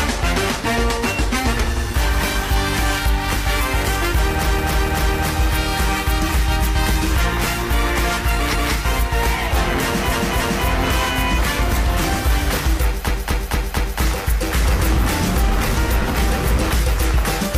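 Stuttering loops interrupt the sound four times: from 4.42 to 5.25 s a 0.28 s stretch plays three extra times; from 8.50 to 8.69 s a 0.19 s stretch repeats once; from 10.08 to 10.64 s a 0.28 s stretch plays twice more; and from 13.05 to 13.99 s a 0.23 s stretch plays four more times. These are repeated frames: short runs of compressed frames were delivered more than once, so the decoder replayed them, adding about 2.5 s to the audio.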